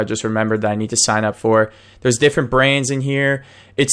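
Speech recording with no audible technical faults.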